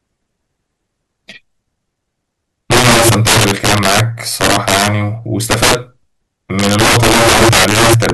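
Violent, snapping cracks tear through the loud parts of this speech from 2.72 to 4.00 s, again from 4.41 to 4.88 s, from 5.51 to 5.75 s, and from 6.59 to 8.10 s, far harsher than ordinary clipping. This is integer overflow: the signal was pushed about 14, 8, 12 and 11 dB too hot in those stretches, and each peak past the integer ceiling wrapped round to the opposite extreme instead of being held at the limit.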